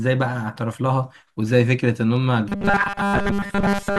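From 2.49 s to the end, the speech turns into a rigid metallic buzz at 200 Hz. This is robotic sound from repeated short buffers, likely from 5 ms chunks replayed over roughly 70 percent of that stretch.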